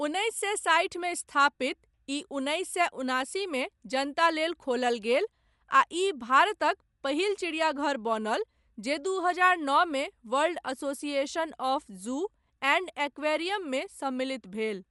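Throughout, the speech sounds dull, with nothing above 11.5 kHz and a rough, fluttering grain. The likely cause is Dolby Digital compression at a starved bitrate, consistent with about 64 kbps.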